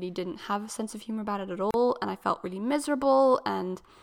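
At 0.91 s, between "didn't have a" and "of humour about it", a repeated buffer: a 2.9 ms piece plays twice, fitting a 128-sample buffer, heard as a click, with a hard seam in the waveform.

From 1.71 to 1.74 s, after "humour about it at" and before "and I felt really", a gap at a join of encoded pieces: encoder delay and padding leave a 34 ms gap, a narrow blank band with smeared edges on a spectrogram.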